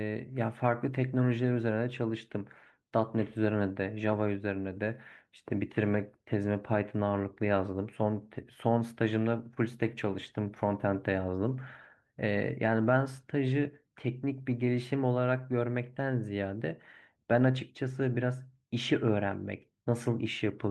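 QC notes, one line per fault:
No faults found; the speech carries the coding texture of a call codec, with the top end stopping around 12 kHz.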